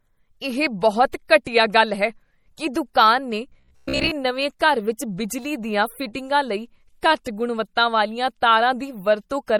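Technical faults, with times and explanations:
Throughout, MP3 compression: the encoder is starved of bits, likely around 48 kbps, so weak frequency lines drop in and out, leaving the speech plainly watery and swirly.
1.45, 4.59, 4.97 and 7.24 s, pre-echo: quantisation noise spreads across whole transform blocks, so a hiss of 13 to 19 ms precedes each sharp attack and softens it.
3.50 to 4.13 s, robotic sound from repeated short buffers: audio arrives too seldom and roughly half the time is filled by likely repeating short chunks, forcing a rigid metallic buzz at 66.8 Hz.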